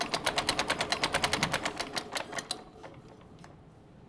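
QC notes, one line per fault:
No faults found in this clip.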